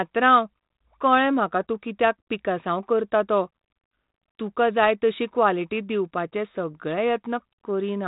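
No technical faults can be heard in this speech.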